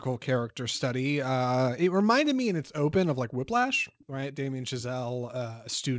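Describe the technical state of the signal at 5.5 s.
At 5.5 s the speech sounds stretched, running at about 93% speed with its pitch unchanged. This jitter buffer slow-down spans 4.92 to 5.53 s: the receiver, short on buffered audio or having raised its target delay, repeated single pitch periods to build a reserve, adding 49 ms.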